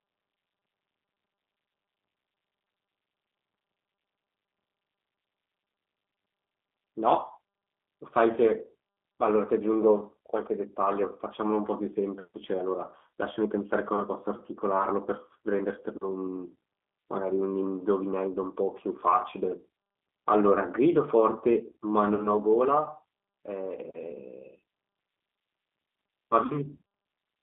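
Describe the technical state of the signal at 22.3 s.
Right at 22.3 s the sound is emerging from VoIP packet loss concealed by the speech codec, which runs from about 22.15 to 22.31 s. Roughly 40 ms of audio went missing, consistent with two 20 ms packets, and the decoder filled the gap by extending its last pitch and filter settings while lowering the gain, giving a buzzy tone or coloured noise that fades. On a spectrogram this shows as smeared, evenly spaced harmonics thinning out, and the waveform shows a shrinking, overly regular envelope that stays weak as real audio resumes.

Underneath sits the G.729 codec at 8 kbit/s, here the G.729A variant, with plainly audible rough, synthetic coloration. The spectrogram is confined to a band of roughly 250 Hz to 3.6 kHz, with nothing above it, and the harmonic detail within that band looks coarse and blurred.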